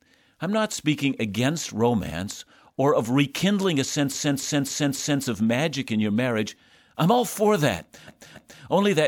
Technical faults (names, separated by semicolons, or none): repeated frames